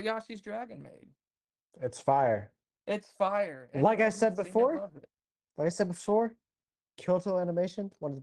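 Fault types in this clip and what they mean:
No technical faults are audible.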